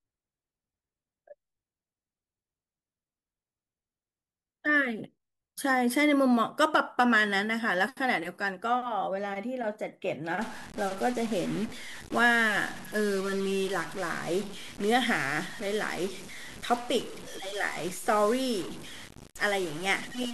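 Speech, and from 10.41 s to the end it turns harsh and buzzy, with the pauses hissing. That's likely a stuck bit, throwing samples off by about -40 dBFS.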